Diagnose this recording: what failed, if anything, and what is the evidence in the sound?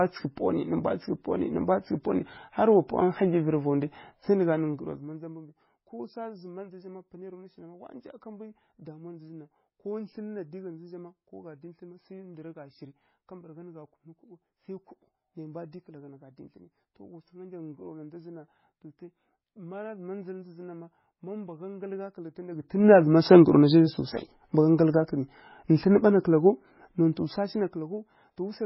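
The codec stage has failed. The speech has nothing above 5.5 kHz and carries a heavy watery, swirling texture throughout, with attacks smeared. This is the sound of likely MP3 compression at a very low rate, consistent with about 16 kbps. Short of bits, the encoder cuts the treble at a fixed point and drops weak spectral lines. Those lines then flicker on and off between frames, which produces the swirl.

The gain stage, at the driver or buffer level, shows zipper noise during two level moves. From 22.48 to 22.88 s the level rises by about 20 dB in 2 dB steps. From 27.04 to 28.0 s it falls by about 15 dB in 1 dB steps. Both moves step at about 30 times per second, and each jump adds a small click, so a ticking zip rides on the speech. The gain is being updated once per block with no smoothing.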